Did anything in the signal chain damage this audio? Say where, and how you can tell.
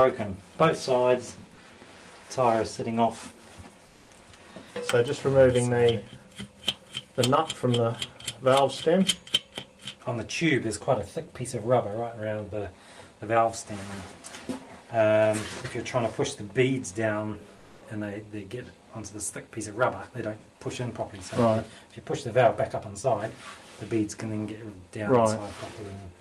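Yes. At the codec stage, comfort noise in place of the background appears from 3.87 to 4.09 s and from 17.57 to 17.81 s. In both pauses the real background, about 33 dB below the loud parts, gives way to smoother synthetic noise, about 1 dB quieter at the first and about 1 dB louder at the second. This is likely discontinuous transmission such as Opus DTX: the sender stops sending during silence and the receiver generates noise. On a spectrogram the background texture turns uniform for roughly a quarter second.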